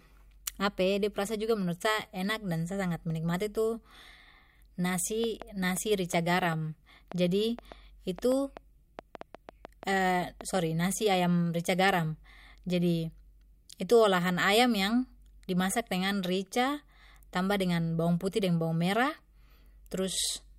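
From 5.24 s to 11.15 s the speech is overlaid by a train of clicks, some twenty sharp pulses of much the same shape arriving at an uneven pace of about 3.7 per second. They stand a few dB above the speech and tick through the pauses as well, stopping just before "rica garam jadi". The regular pulse shape points to a likely source in electrical interference from nearby equipment or a faulty connection or power supply.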